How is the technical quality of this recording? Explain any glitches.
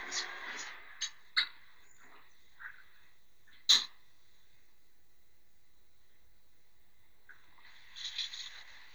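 The recording carries one technical fault, and it runs through the whole clip. DC offset is present from start to finish. The waveform sits slightly off the zero line, shifted by a constant amount of about -52 dBFS. This offset cannot be heard as a tone or a noise. It shows up as steady energy at 0 Hz, the very bottom of the spectrum. It also takes a small slice of headroom, so peaks reach clipping slightly sooner on one side.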